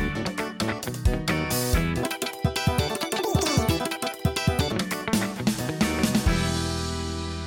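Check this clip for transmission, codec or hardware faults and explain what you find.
One fault is present. A section at the wrong speed runs from 2.03 to 4.72 s: the audio plays at 2.0 times its recorded rate, likely from being read against the wrong clock, so it turns hurried and jumps around ten semitones higher before snapping back.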